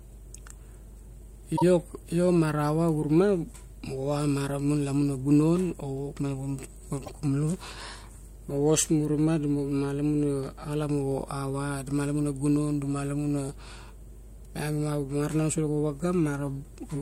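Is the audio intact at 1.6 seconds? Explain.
No. There's a repeated-frames fault from about 1.56 to 1.63 s, right before "io ma ra va". A single compressed frame of about 26 ms, a length that points to an MP3-style frame, gets decoded and then played twice more. You hear a quick stutter, and the clip runs about 52 ms longer than it should.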